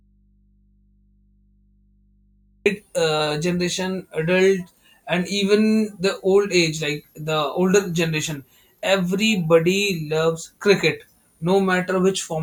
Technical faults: audio dropout to a faint residue

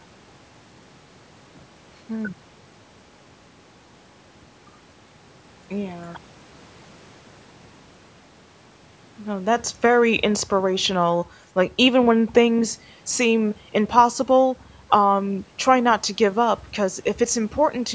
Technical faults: none

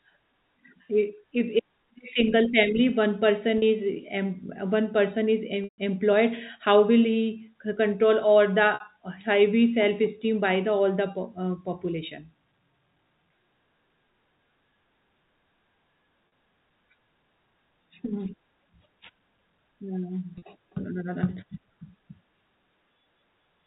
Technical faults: packet loss with pitch repetition

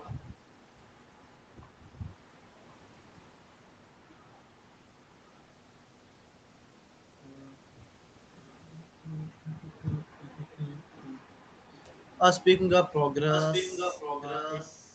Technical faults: echo leak

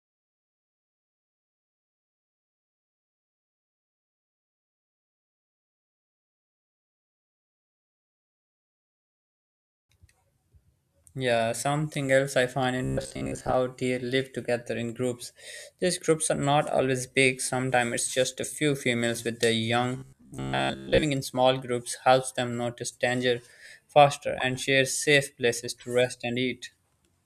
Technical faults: robotic sound from repeated short buffers

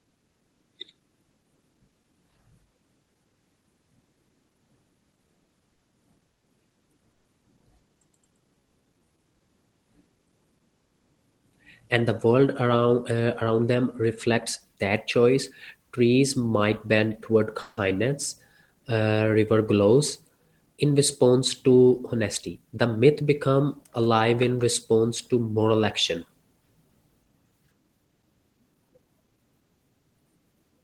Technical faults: repeated stalls (stutter); call audio freeze; jitter buffer slow-down; jitter buffer speed-up

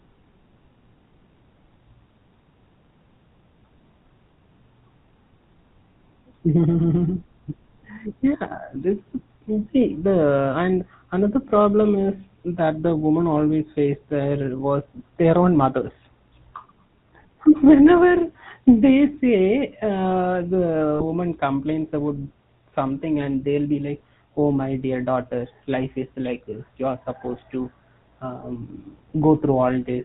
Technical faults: GSM full-rate codec; lost GSM frames

